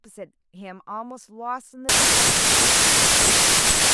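At about 1.89 s the speech falls apart into a wrong sample width fault, running right through to the end. The data look to have been written as packed 24-bit samples but read back as 16-bit, so most values are stitched together from mismatched bytes. You get a loud wash of noise with the speech buried underneath, playing at about two-thirds speed, so everything sounds dragged and lower in pitch.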